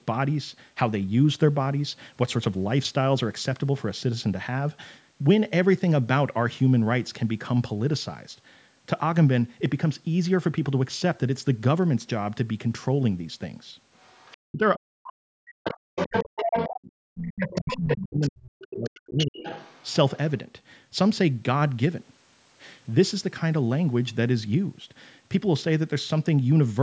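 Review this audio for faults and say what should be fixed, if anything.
Other side's voice leaking through: a second voice comes in faintly at 13.99–14.37 s and 15.07–15.13 s, then louder at 15.64–16.88 s (about 5 dB under the talker), 17.46–18.3 s and 18.61–20.17 s. That's likely loudspeaker echo the canceller didn't fully remove. A headset, or better echo-canceller tuning, would stop it.

Speech suppressed in double talk: from 14.51 to 19.45 s the talker keeps dipping, by roughly 40 dB at worst and for about 4 s in total, likely because the canceller ducked everything while both sides spoke. A canceller with proper double-talk detection would keep the talker's voice up.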